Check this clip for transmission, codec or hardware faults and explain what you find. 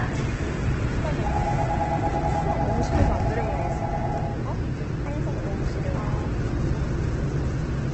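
One fault runs through the whole clip: heavy Opus compression.

It lasts from start to finish. Nothing is heard above about 8.2 kHz, so the sound is dull and narrow. What remains is grainy and rough, with tones turned noisy rather than swirling. This is likely an Opus encoder in its CELT music mode. It kept each band's energy but filled starved bands with folded or noise content. The cut-off and damage point to a bitrate near 12 kbps.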